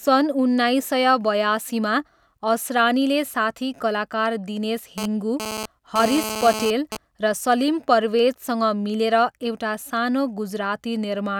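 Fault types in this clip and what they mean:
GSM phone buzz: A 2G handset close to the recording chain is sending short radio bursts about 217 times a second, and the audio circuitry demodulates those pulses into the signal path. In this speech clip it appears from 4.98 to 6.97 s as a coarse, rasping buzz at 217 Hz, thick with harmonics and unrelated to the talker, at about 7 dB below the speech. Its short, intermittent run fits a phone exchanging data rather than holding a call.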